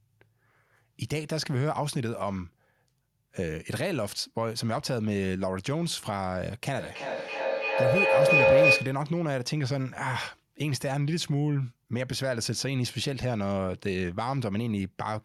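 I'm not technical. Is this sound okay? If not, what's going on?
No. From about 6.8 to 9.1 seconds a mid-pitched tone swells over the speech, pulsing roughly three times a second. This is feedback howl: two devices on the same call in one room keep re-amplifying each other's sound until it rings.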